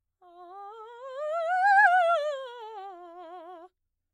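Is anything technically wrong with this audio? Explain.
No, nothing technically wrong turns up here; the music just runs along without any hiccups worth pointing out.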